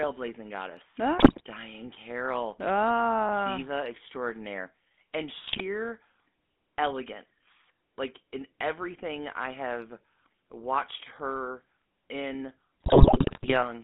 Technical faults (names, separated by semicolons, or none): GSM full-rate codec; GSM bit errors